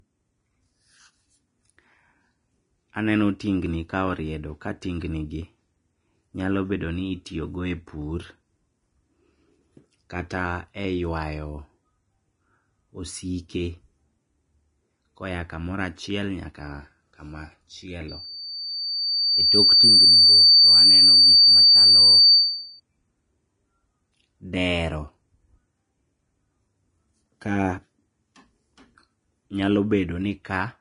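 From start to finish the speech carries likely Vorbis compression: nothing reaches above 10.6 kHz, and the treble turns grainy and hissy, with plainly audible damage that points to a low bitrate near 30 kbps. Unlike steady background hiss, this graininess comes and goes with the speech itself.

From 18.08 to 22.80 s a loudspeaker feedback squeal appears. A single 4.6 kHz tone swells over roughly two seconds to about 15 dB above the speech, because the microphone-to-speaker loop exceeds unity gain at that frequency. The gradual build-up on one pitch sets it apart from a fixed, constant whistle.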